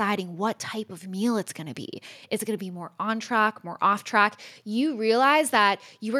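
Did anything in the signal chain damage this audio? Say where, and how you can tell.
No, nothing along the chain audibly damages this speech recording at any stage.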